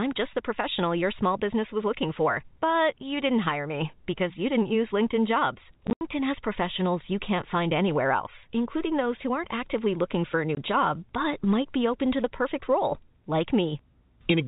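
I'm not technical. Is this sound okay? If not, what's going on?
No. There is packet loss filled with silence: pieces of the speech got lost in transmission, and the receiving end played silence instead. Between 5.87 and 6.01 s, just before "has professionals you can't", scattered holes chop the speech, and at 10.55 to 10.57 s, between "actively looking for a" and "job but might be", a brief gap appears. The telephone-style sound itself, typical of a normal landline call, isn't a problem.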